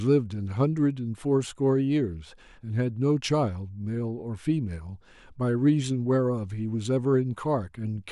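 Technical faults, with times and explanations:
Nothing technical goes wrong anywhere in this bit of speech; there's simply no fault to report.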